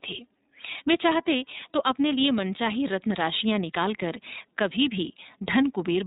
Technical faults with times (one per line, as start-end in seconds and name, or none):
0.00-6.07 iLBC codec